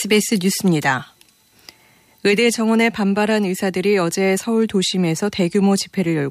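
Nothing stood out on listening to the speech in this recording.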